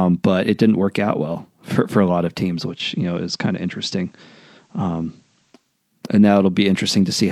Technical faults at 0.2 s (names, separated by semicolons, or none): none